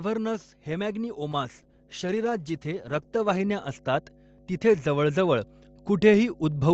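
A ground loop or nearby transformer is coupling the 50 Hz power line into the signal for the whole clip, so mains hum sits under the speech as a steady low drone with some low harmonics, roughly 20 dB below the talker and never letting up.

From 0.64 s to the end, the automatic gain control judges the input too quiet and keeps raising its gain. This automatic gain rising makes the speech and the hum swell upward together, a slow climb in loudness rather than any sudden step.

Between 1.33 and 3.49 s the call's bandwidth estimate collapses and the Opus encoder is pushed from 32 kbps down to 9 kbps, staying near the bottom for about 2.1 s. During this call bitrate drop the speech turns coarse and watery, and the upper frequencies are cut off below the 8 kHz ceiling the call path otherwise carries, until the rate comes back.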